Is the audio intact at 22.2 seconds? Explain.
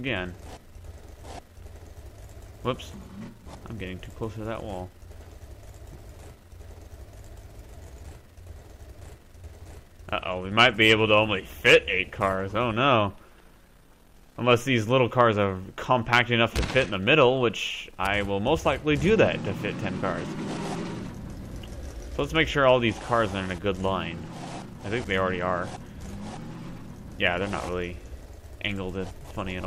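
Yes, the audio at 22.2 seconds is intact, with no fault or disruption at that moment.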